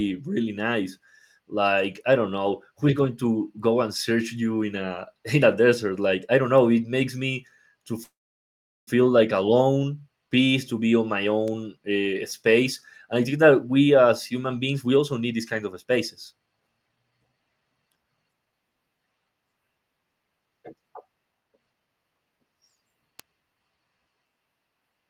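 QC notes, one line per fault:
8.03–8.89 s, call audio freeze: the speech stops abruptly, with a brief fading buzz continuing the last sound before about 0.74 s of silence, then resumes exactly where it broke off with nothing lost. The likely cause is packets held up in transit, so the jitter buffer ran dry and the receiver filled the 0.84 s wait with a decaying continuation. Because the audio is paused rather than skipped, everything after this point runs about 0.84 s later.
11.48 s, 12.30 s, 23.20 s, bit error spike: each is a single sharp tick, broadband and bearing no relation to the speech around it. A flipped bit in memory or on a digital link made the sample value jump by a power of two and snap straight back. That affected three consecutive samples at 11.48 s, one at 12.30 s and two at 23.20 s, too brief to be anything but an instantaneous click.
13.08–13.51 s, 14.72–15.92 s, 16.32–18.53 s, 21.33–22.83 s, jitter buffer speed-up: the speech sounds hurried while its pitch stays unchanged. 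The rate is 110%, 109% and 113% in the first three spans and a clearly rushed 126% in the last. Too much audio had built up in the jitter buffer, so the receiver trimmed out many short pitch-period slices to cut the delay. It removed roughly a twentieth of a second, a tenth, three tenths, and four tenths of a second in turn.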